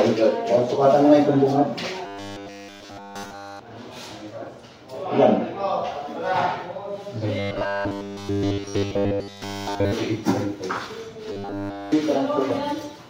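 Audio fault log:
2.06–3.59 s, 7.39–9.93 s and 11.32–11.92 s, robotic sound from repeated short buffers: in each stretch the sound collapses into a rigid, metallic 100 Hz buzz that only loosely follows the underlying audio, with essentially none of it coming through unrepeated. This is likely from late-arriving buffers being filled by looping a 10 ms segment. On a spectrogram, evenly spaced horizontal harmonics appear at multiples of 100 Hz; the waveform shows an identical short pattern repeating every 10 ms.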